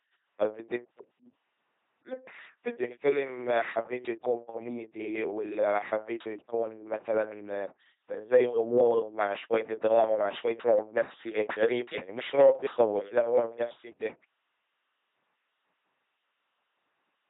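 Speech runs through an LPC-10 vocoder for its whole length, with heavy damage. The voice sounds buzzing and robotic, rebuilt from a pulse train or noise through a simple tract filter. Nothing survives above 3.8 kHz, which fits a 2.4 kbit/s coder.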